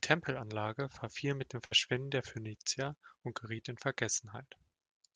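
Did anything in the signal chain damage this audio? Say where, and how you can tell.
Yes, there's a burst of packet loss in the network leg of the call, from about 1.65 to 1.73 s. The receiver had nothing to play for roughly 55 ms, so it kept stretching the last bit of sound and fading it out, giving a brief buzzy or hissy tail. When real audio picks up again, about 60 ms of the original is simply gone. The call codec's usual top-end limit near 12 kHz applies throughout.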